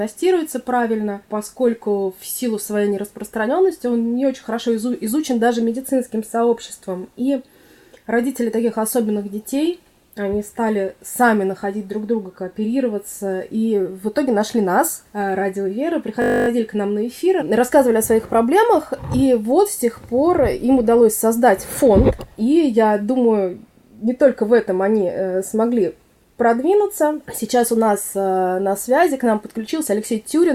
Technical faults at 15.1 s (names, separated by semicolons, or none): none